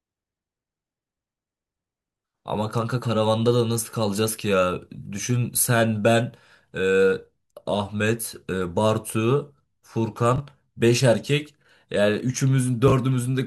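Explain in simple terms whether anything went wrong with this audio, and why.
Brief jumbled moments at 10.36–10.40 s and 12.88–12.92 s: chunks out of order, where a 20 ms slice played one slot late, swapping places with its neighbour.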